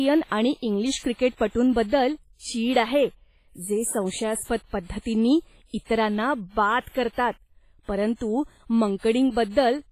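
Speech runs through the whole clip with heavy transform-codec damage, most likely WMA compression at a low bitrate, around 24 kbps to judge by the sound. Quantisation noise smears across tens of milliseconds, giving a ringing, washy texture and a hiss that swells and fades with each phrase. On a spectrogram the energy stops sharply at 15.4 kHz, weak harmonics appear as blotchy holes, and pre-echo haze precedes onsets in the waveform.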